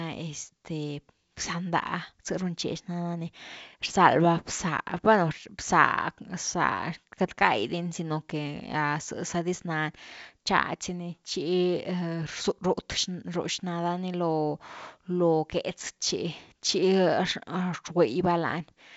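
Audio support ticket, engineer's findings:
No faults found; the speech comes through G.722 wideband coding at 64 kbit/s with nothing above about 7.7 kHz.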